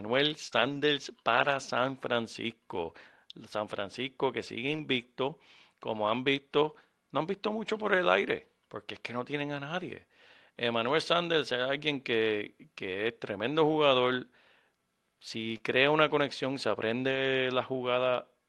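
Speech carried over a WebRTC call path, with the top of the spectrum ending near 12 kHz, which fits Opus at around 32 kbps. The first fault is a burst of packet loss from 0.47 to 0.54 s. The receiver stretches the last sound for about 48 ms, fading it into a held buzz or hiss, then resumes about 40 ms further on, so that stretch of speech is simply gone. This skip-ahead is what separates it from the rebuilt frames that follow, where nothing goes missing. Overlapping its tail, from 0.52 to 0.82 s, comes a lost packet rebuilt from error correction, repeated over roughly 160 ms. The same happens again from 1.34 to 1.52 s, over about 100 ms. These spans match several separate 20 ms frames decoded from the low-bitrate copies Opus tucks into following packets. There is no gap and no held tone here; the sound keeps moving but turns grainier and noisier, which sets it apart from the concealment at 0.47 s. 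The last fault is short concealed packet loss at 15.57 to 15.61 s. About 20 ms of audio never arrived, and the decoder extrapolated from the preceding sound for roughly 19 ms before blending back. It comes across as a brief smear or wobble, far shorter than the burst near the start, and without the rough texture of the rebuilt frames.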